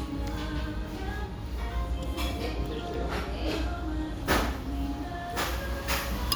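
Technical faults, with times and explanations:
No technical faults can be heard in this everyday sound recording.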